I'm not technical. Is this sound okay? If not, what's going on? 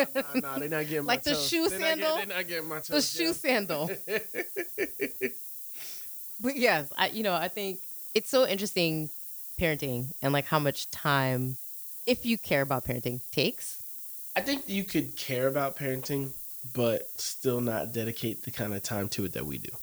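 No, not quite. The speech carries a steady, thin hiss from the very start to the end, and it gets sharper and brighter toward the top. That's low bit depth with noise shaping. The recording keeps very little detail per sample (it sounds like about 7 bits), and the rounding errors get pushed up into the highest frequencies. The result is a fairly loud, bright hiss riding on the speech the whole way through.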